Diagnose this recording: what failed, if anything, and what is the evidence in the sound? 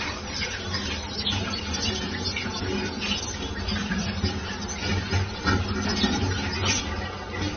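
Codec stage: what you hear is transcoding between lossy codecs. For the whole clip there's nothing above about 6.3 kHz, and two flavours of smeared, swirly artefacts sit on top of each other, which likely points to a low-rate AAC encode re-encoded to roughly 32 kbit/s MP3, each pass compounding the damage.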